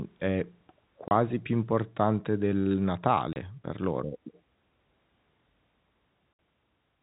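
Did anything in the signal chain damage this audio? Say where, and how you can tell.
Yes, at the network stage. The speech drops out to dead silence three times, each hole opening and closing with a hard edge: from 1.08 to 1.11 s between "è p" and "più importante del", from 3.33 to 3.36 s between "più importante del" and "per loro", and from 6.33 to 6.39 s. That is packet loss filled with silence. The 30 ms gaps fit a single lost 30 ms packet, and the 60 ms gap fits two in a row. The receiver inserted silence instead of concealing the missing audio, so the waveform cuts abruptly at each edge. The G.711 telephone coding underneath limits the band to below 4 kHz.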